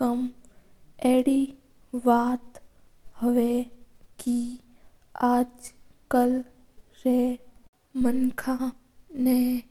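Audio missing between chunks at 0.92, 2.87, 4.82 and 8.72 s: this speech recording has brief skips where a small slice of sound, around a twentieth of a second, vanishes and the audio on either side is butted together with no gap. The spacing of roughly 2 s points to a recorder that likely processes audio in 2 s blocks and drops a fragment each time it hands over from one block to the next.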